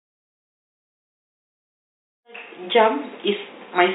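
No technical faults can be heard in this recording.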